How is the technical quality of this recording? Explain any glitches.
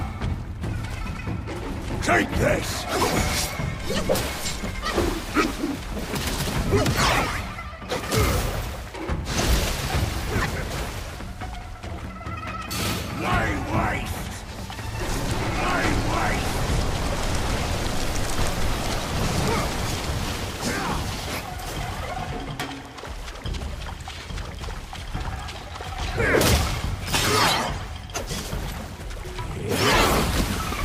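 No technical faults can be heard anywhere in the recording, so there are no glitches to explain.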